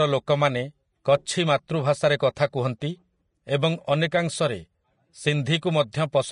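From start to finish the speech has nothing above 10.5 kHz, and the treble sounds hissy and grainy, with roughened tones and smeared consonant attacks. This is likely Vorbis compression at a low setting, which fits roughly 32 kbps, coarsely quantising high-frequency detail into noise.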